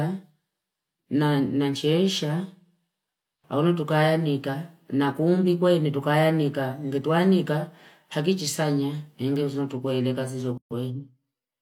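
At 10.58 s, separately encoded pieces were joined without trimming encoder delay and padding, leaving a gap at the join: a 131 ms gap after "kweile kazi" before the speech resumes.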